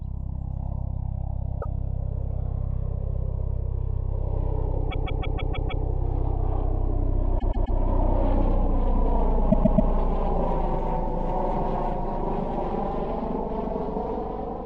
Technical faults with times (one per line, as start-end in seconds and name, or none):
1.61-1.66 repeated frames
4.90-5.84 repeated frames
7.38-7.77 repeated frames
9.50-9.89 repeated frames